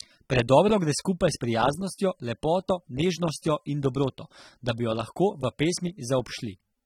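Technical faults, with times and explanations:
Throughout, AAC compression: the speech sounds plainly dull and smeared, with a fizzy, warbling texture on sibilants and held sounds, and nothing above 19.4 kHz. This likely comes from AAC-LC coding at a low rate, around 27 kbps, which quantises the spectrum coarsely.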